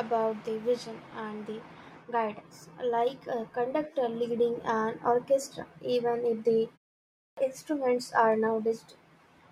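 This speech clip has a clipped start after a pause: the output device dropped into a sleep state during a 0.46 s gap and had not fully woken or re-locked when sound resumed. The result is that about 223 ms of audio, from 7.15 to 7.37 s, between "orchestra even if the" and "instruments are", is swallowed, so speech bursts in abruptly out of silence with its opening sounds missing.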